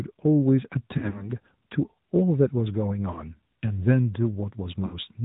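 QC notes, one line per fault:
Throughout: AMR narrowband mobile codec at 10.2 kbps. Nothing above 4 kHz survives. The sparse pulse model makes the sound plainly buzzy and synthetic.
0.98–1.31 s, 3.12–3.32 s, 4.86–4.98 s: lost AMR speech frames. The decoder repeats old settings with falling gain, so sound smears, dips and returns rough. The first run loses about 100 ms across 160 ms, fitting five 20 ms frames.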